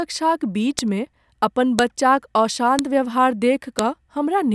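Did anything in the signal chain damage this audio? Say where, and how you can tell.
Yes: at the storage or streaming stage, one-second WAV pieces kept their headers, so file header played as audio gives sharp clicks at 0.79, 1.79, 2.79 and 3.79 s.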